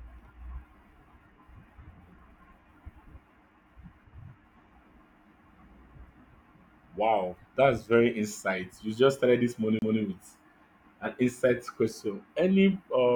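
A CD skip occurs at 9.79 to 9.82 s, just after "just started this": a knock or a flaw sends the laser onto another turn of the disc's spiral, so the speech breaks off with a brief mute of roughly 30 ms before resuming from a different point.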